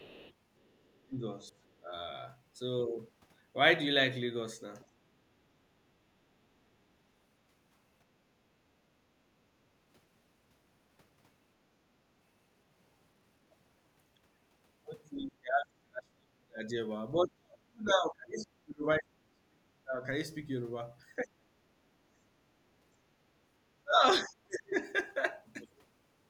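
It's a speech clip with echo-canceller trouble in a few places. Right at the start, 0 to 0.33 s, there's other side's voice leaking through, sitting roughly 25 dB under the talker. That's likely faint residual echo the canceller didn't fully scrub from the loudspeaker pickup. Then there's speech suppressed in double talk at 0.99–1.93 s, 15.16–16.62 s, 17.24–20.04 s, 21.23–21.49 s and 23.83–24.75 s. The talker's voice dips hard, by roughly 30 to 40 dB at worst, most heavily in the 15 to 20 s stretch. It's likely both sides talking at once, with the canceller ducking everything. Around 5.15–5.52 s the background is gated by the echo canceller: the room sound drops about 12 dB while the loudspeaker plays, then comes back when the canceller releases.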